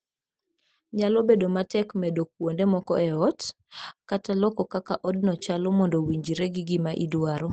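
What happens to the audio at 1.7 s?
Just before that point, from 1.63 to 1.65 s, a lost packet was rebuilt from error correction: a 20 ms frame played from the next packet's low-bitrate Opus copy, sounding briefly rougher and noisier, with no gap.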